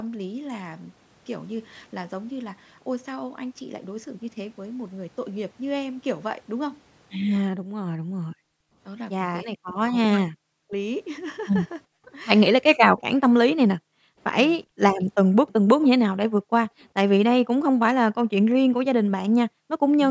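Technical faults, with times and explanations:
7.77–12.09 s, speech suppressed in double talk: the speech repeatedly dips, falling by about 40 dB at its deepest, for roughly a second in total. This likely comes from both ends talking at once, so the echo canceller turned down the wanted speech along with the echo. Unlike gating, the speech itself is cut.
8.52–8.78 s, 13.76–14.79 s, 16.41–16.81 s and 19.49–19.87 s, background gated by the echo canceller: the room sound drops by about 40 dB and then returns while the loudspeaker plays. The canceller clamped the microphone, so these holes fall in the background, not the speech.
12.98–13.02 s and 15.0–16.84 s, echo leak: a faint delayed copy of the far-end audio comes through, 387 ms late and about 30 dB down in the brief first scrap, then 410 ms late and about 20 dB down. This is likely residual loudspeaker echo the canceller missed. It adds sound rather than removing it.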